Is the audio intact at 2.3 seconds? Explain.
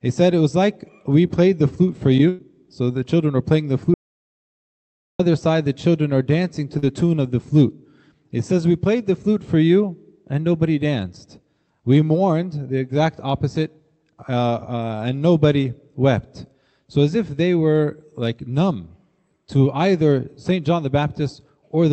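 No. A burst of packet loss from 2.29 to 2.41 s drops about 100 ms; the receiver extends and fades the last sound, then resumes past the gap.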